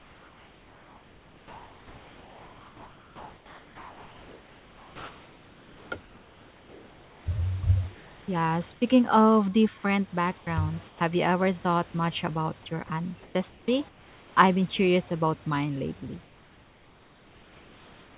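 From 0 to 7.26 s, 7.95 to 8.82 s, and 10.38 to 11.01 s (after "of different"), the room background flattens into a steady, featureless hiss. This is comfort noise in place of the background, likely from discontinuous transmission filling pauses with synthetic noise. From 12.87 to 14.37 s, between "thought much about your" and "I've been curious about", the speech turns choppy. This is sound chopped by the voice detector, which likely toggled sending and replaced quiet parts with fill. After "curious about mine lately", from 16.23 s to the end, the hiss returns about 3 dB quieter. This is comfort noise again, likely from the same cause.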